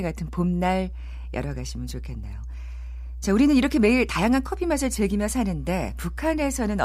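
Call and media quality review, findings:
Mains hum throughout the speech: steady low 60 Hz drone with some low harmonics, about 10 dB under the speech level. Probable component: analogue input stage. A ground loop or nearby transformer is coupling power-line current into the signal path.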